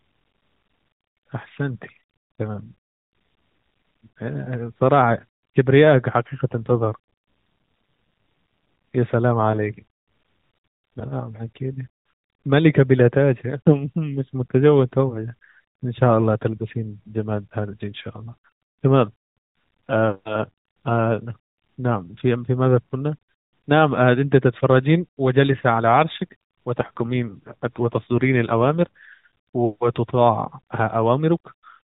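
AMR rate drop in this speech, from 6.7 to 9.0 s and again from 26.8 to 29.1 s: the narrowband mobile codec falls to a lower mode, which fits a shift from 12.2 to 5.9 kbps. Fewer bits go to the voice, so it turns buzzier and more synthetic. The band does not change and there is no gap.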